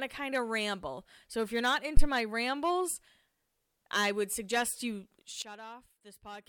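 At 1.97 s, right after "if you're not", there's a phantom power thump: a supply switched on or off on a live input, and the voltage step rode through the coupling capacitors as a deep thud. It dies away within about 19 ms and is gone by 2.05 s, before "my rambles".

Then at 5.42 s, just after "I would suggest you", comes a sudden gain jump. The level drops by about 17 dB in one step and stays down to the end, with the background noise falling along with the speech. That's likely a digital gain change applied without any ramp.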